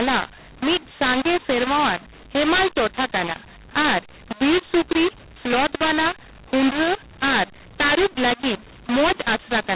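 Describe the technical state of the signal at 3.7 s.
A mu-law and A-law mix-up affects 3.7 s and the whole clip: A-law telephone samples are decoded as mu-law, scrambling levels so the speech sounds harsh and pauses fill with noise.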